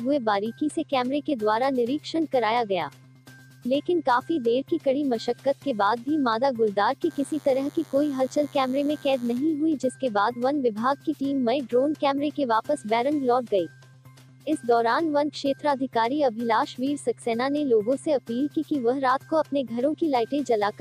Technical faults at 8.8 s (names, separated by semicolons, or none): DECT cordless phone buzz